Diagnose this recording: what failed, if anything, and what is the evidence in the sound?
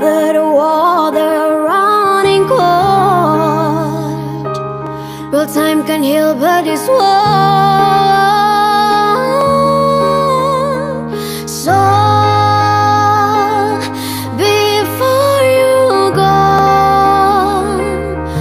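Three isolated sharp clicks at 4.87, 9.41 and 16.59 s point to dropped samples, likely lost at the driver or buffer stage. Each gap is under a millisecond, so the waveform jumps without losing audible sound. That sets it apart from a dropout, which leaves a hole.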